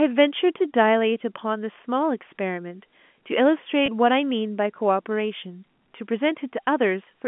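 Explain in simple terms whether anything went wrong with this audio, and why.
At 3.86 to 3.88 s the voice briefly catches, with a tiny held, slightly buzzy sound lasting about 20 ms. This is packet loss with pitch repetition. The sound travelled as small packets, and one went missing. To avoid a gap, the receiver repeated the last cycle of the voice's pitch to fill the hole, which produced that short buzz. The G.711 telephone coding carrying the call limits it to the usual phone range.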